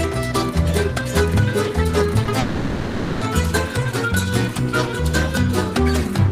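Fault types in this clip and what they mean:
Short concealed packet loss: About 20 ms of audio failed to arrive in time, around 2.25 to 2.29 s. The receiver patched the gap by extending the preceding sound and blending back. It shows as a brief smear or wobble.
Long network dropout: From about 2.39 to 3.23 s, roughly 820 ms of sound is replaced by a continued, fading buzz or hiss with no true silence. The sound then resumes, the lost stretch gone. A likely cause is a network dropout.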